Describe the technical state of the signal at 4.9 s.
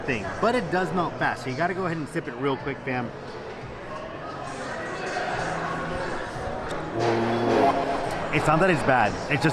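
At 4.9 s the signal is intact, with no audible fault at that moment.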